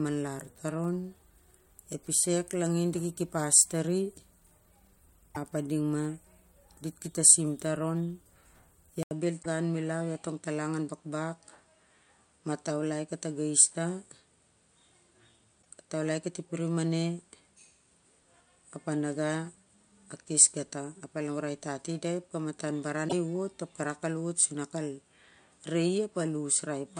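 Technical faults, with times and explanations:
5.34–5.37 s, 9.42–9.46 s, 15.61–15.66 s, 23.08–23.13 s: broken MP3 bit reservoir. Each time the sound skips ahead with a brief garbled chirp, noise burst or short hole, 28 to 52 ms long with 24 ms frames, before "ep a ding ma" the first time. Likely cause: cut frames leave later frames reading another frame's borrowed bytes.
9.03 s to end: input switched to a poorer device. After an 80 ms gap, the speech turns duller, with nothing above 9.6 kHz and a faint new noise floor far beneath it. Loudness stays about the same. The narrower band likely comes from a different, lower-grade microphone.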